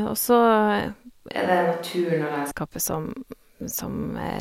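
At 1.32 s the speech turns hollow, thin and a few decibels quieter, with more room noise. It sounds like a switch to a distant microphone, likely, until 2.51 s.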